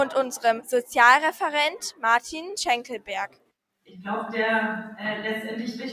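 Throughout, a noise suppressor meant for speech is applied to this sound. It treats steady parts as noise, so levels pump and sag by roughly 5 dB. From 3.28 to 3.52 s, the noise suppressor cuts the sound hard. It mistakes it for noise and pulls it down by about 18 dB, leaving a brief hollow dip.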